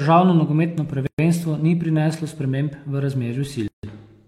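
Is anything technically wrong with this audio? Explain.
Yes. There are two gaps at a join of encoded pieces: one from 1.07 to 1.19 s, lasting 117 ms, and another from 3.68 to 3.83 s, lasting 154 ms. The speech was encoded in separate pieces that were joined without trimming. Each piece therefore keeps the encoder's start-up delay and its padded final frame. At each join the speech drops into silence with smeared edges, then resumes exactly where it stopped.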